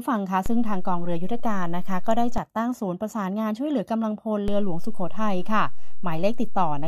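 At 0.46 s the speech picks up a DC step: the waveform's zero line suddenly jumps by about -18 dBFS, as if an offset input were switched in, then drops back at 2.38 s. A second step at 4.48 s holds to the end. Each jump is a low thump under the unchanged speech. On the waveform the trace visibly shifts off centre; a spectrogram shows brief broadband ticks with energy piled at the lowest frequencies.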